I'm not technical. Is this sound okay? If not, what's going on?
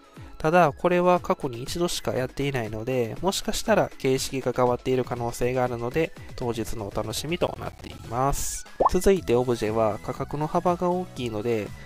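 No. There is processor overload crackle from 7.47 to 7.99 s, about half a second of gritty, crackly tearing. The computer handling the audio works in small slices of roughly ten milliseconds each, and here it got too busy to finish them on time. About fifteen slices came out as tiny gaps of silence with hard edges. Strung together, those gaps sound like crackle riding on the audio until the workload eases.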